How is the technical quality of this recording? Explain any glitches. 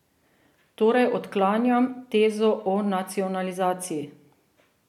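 No glitches turn up anywhere in this short speech recording, so there's nothing to explain.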